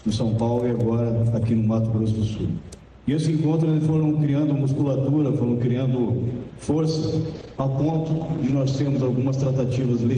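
A call bitrate drop runs from 7.34 s to the end of the clip. A falling bandwidth estimate pushes the encoder from 32 to 10 kbps, bottoming out for 1.21 s, and the band narrows from 20 kHz to 8 kHz, leaving the sound coarse and muffled.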